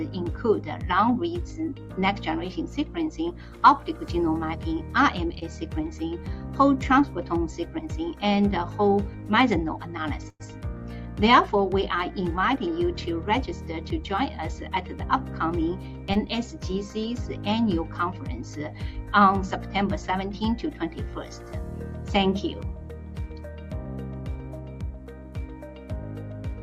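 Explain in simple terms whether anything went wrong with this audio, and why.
Yes, two kinds of network trouble show up. At 5.39 to 5.43 s and again at 16.14 to 16.17 s there is short concealed packet loss. About 20 ms of audio failed to arrive in time, and the receiver patched the hole by briefly stretching the sound it had just played. You hear only a tiny smear or wobble, and anything very short in that spot may drop out. The audio carries straight on afterwards.

From 10.29 to 10.42 s there is a burst of packet loss, which is much bigger. Around 100 ms of audio went missing in one go. The receiver held the last sound for roughly a tenth of a second, letting it fade as a buzz or hiss, with about 40 ms of silence in the patch, before the real audio returned further along. What separates it from the short dropouts is that a noticeable chunk is gone, with an audible held tail and gap, not just a blip.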